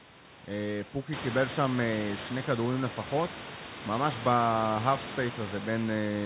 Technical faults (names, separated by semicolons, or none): none